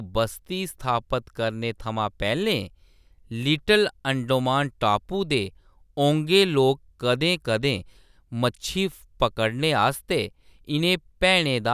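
No technical faults are audible.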